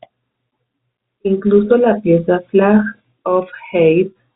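No technical faults can be heard in this speech. It comes through G.711 telephone coding, heard as a narrow band with nothing above about 3.8 kHz.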